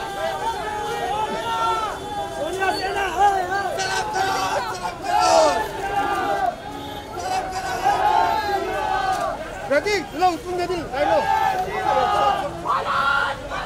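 No technical faults are audible.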